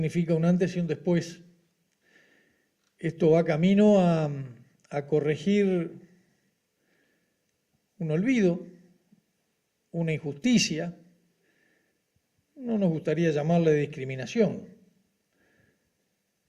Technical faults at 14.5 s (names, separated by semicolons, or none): repeated frames